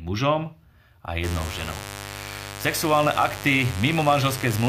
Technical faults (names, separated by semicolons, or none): mains buzz